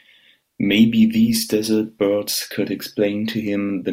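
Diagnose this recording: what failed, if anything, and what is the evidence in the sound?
Nothing in the signal chain shows a failure: the speech signal stays continuous and stable, with no stage from capture through to playback leaving any audible trace of trouble.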